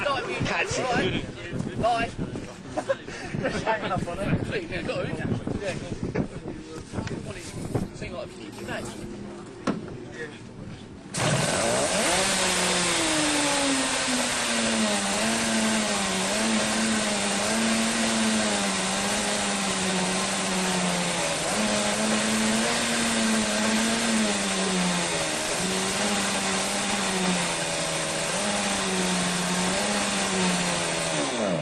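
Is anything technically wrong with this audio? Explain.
No technical faults are audible.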